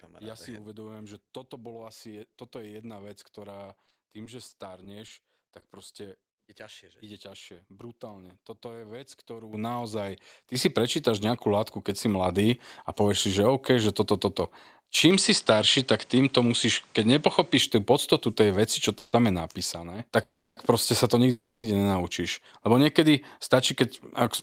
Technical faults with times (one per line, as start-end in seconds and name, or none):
3.65-7.43 scattered short gaps
9.53 microphone volume stepped up
10.55 microphone volume stepped up
12.26 microphone volume stepped up
18.99-19.15 call audio freeze
20.23-20.59 call audio freeze
21.31-21.66 call audio freeze
23.40-24.23 jitter buffer speed-up